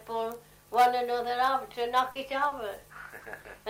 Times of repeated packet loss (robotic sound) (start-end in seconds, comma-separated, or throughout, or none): 2.11-3.46